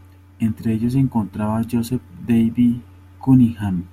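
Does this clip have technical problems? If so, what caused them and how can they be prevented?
No, the speech signal is technically sound throughout, with nothing that needs diagnosing or preventing.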